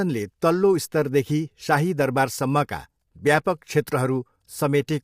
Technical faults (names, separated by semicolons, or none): low-delay AAC compression